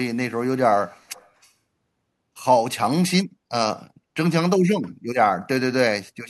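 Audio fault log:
0.84–1.51 s, echo leak: a faint, delayed copy of the speech trails the original by about 245 ms, sitting well below it, somewhere around 30 dB down. The likely cause is a far-end loudspeaker being picked up by its microphone and not fully cancelled before being sent back. Unlike room reverberation, which smears into a smooth decaying tail, this is a distinct repeat arriving a clear quarter-second later, then stops.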